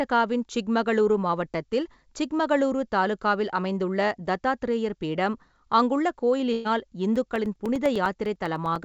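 Right after "அமைந்துள்ள தத்தாத்ரேயர் பீடம் அங்குள்ள", from 6.53 to 6.68 s, a burst of packet loss holds the last sound and fades it for about 120 ms, then the speech resumes further on with that stretch skipped. Unlike a dropout, it is a single long concealed gap rather than a tick.

From 7.16 to 8.76 s, periodic USB or driver dropouts cut roughly 2 ms to silence every 0.1 s, about fifteen times. They are heard as an evenly spaced ticking that is audible only while there is signal, with no concealment fill, which distinguishes them from packet loss.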